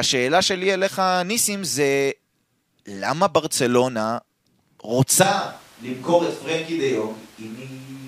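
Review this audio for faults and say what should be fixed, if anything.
At 5.23 s the speech abruptly goes roomy and hollow, loses its low end and drops about 5 dB, with room noise sitting roughly 25 dB under it right through to the end. That's likely a switch to a distant microphone after the close mic's feed dropped out or got left out. Next time, monitor the close mic throughout the take and confirm its track is the one in the edit before exporting.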